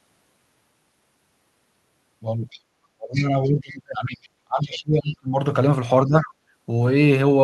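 At 2.5 s a brief scrap of a second voice, the other side's voice leaking through, sits well below the talker, probably about 25 dB down. It returns from 3.13 to 4.29 s and 4.62 to 5.15 s, and again at about 6.3 s. The likely cause is loudspeaker echo the canceller failed to remove. It adds a foreign voice rather than taking anything away. From 2.95 to 5.36 s, speech suppressed in double talk pulls the talker's own voice down, for roughly two seconds in all and by as much as about 30 dB. A shorter, shallower dip follows from 6.06 to 6.29 s. The canceller likely mistook the overlapping talk for echo. Unlike the leakage, this is a loss of the wanted voice.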